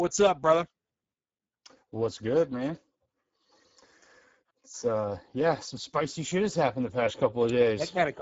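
From start to finish the speech sounds noisy and hoarse, with a grainy, synthetic edge, and nothing is heard above 7.7 kHz. This is Speex codec damage: the coding points to a low bitrate near 10 kbps, leaving the excitation too few bits.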